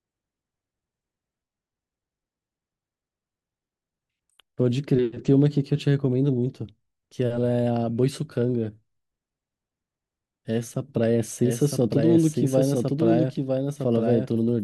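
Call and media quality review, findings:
Doubled audio track from 11.43 s to end: full-band copy about one second behind, a few dB quieter, abrupt onset, no decay. Likely a second, slower capture path mixed in.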